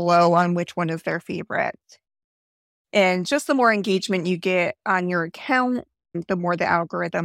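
At 2.25 s the speech drops to silence and stays silent until 2.85 s. This is a rebuffering stall. The player ran out of downloaded audio and waited for more. Playback then resumes exactly where it stopped. Nothing is lost, but about 0.59 s of dead air is added.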